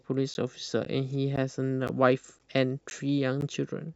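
Speech interrupted by a gap between chunks: 12 ms hard-edged silences at 0.34, 0.85, 1.36, 1.88, 2.39, 2.90 and 3.41 s, evenly spaced about every 0.5 s, with nothing lost, unlike random dropouts.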